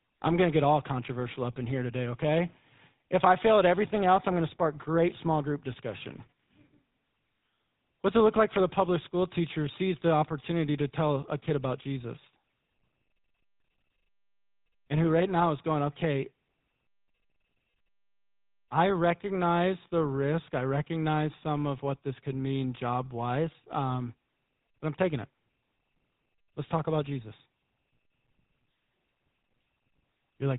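From start to finish, the speech carries the sound of the GSM full-rate codec. Nothing comes through above 4 kHz, so the top end is missing. The codec rebuilds the voice from a simple model of the vocal tract. It drives that model with evenly spaced pulses and discards much of the detail in between. The result is plainly audible: a buzzy, gravelly roughness in the voice. This character fits the 13 kbps full-rate GSM scheme.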